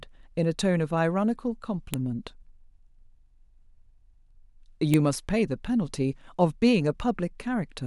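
A speech recording with a file header played as audio: sharp, loud clicks at 1.94 s and 4.94 s, exactly 3.0 s apart. Each marks a joined 3-second piece whose WAV header bytes were left in and decoded as samples, regardless of the speech underneath.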